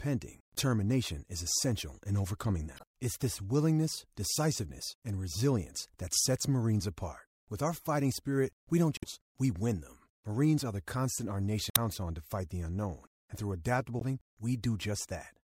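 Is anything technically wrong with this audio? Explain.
Yes, there's damaged data in the compressed stream, five short hits at 0.54 to 0.58 s, 2.76 to 2.83 s (just after "is essential in overcoming"), 8.97 to 9.04 s (between "fighting spirit we don't" and "we win them"), 11.69 to 11.78 s, and 13.98 to 14.02 s (after "the unknown and through"). Corrupted bytes there throw the decoder off, so it misreads those frames and hunts for the next valid header. Each spot comes out as a brief glitch in the speech.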